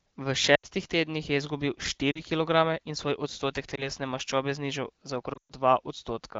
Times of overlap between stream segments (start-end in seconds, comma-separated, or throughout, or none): none